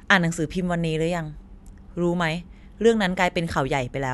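No technical faults can be heard anywhere in the recording, and the signal keeps the same steady, undisturbed character throughout.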